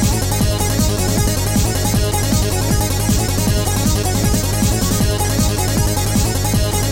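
Nothing in this audio stood out as a technical problem on listening.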